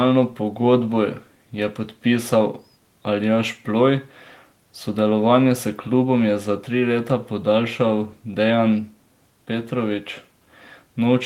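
Nothing technical goes wrong anywhere in this speech recording, so there's no fault to point to at any moment.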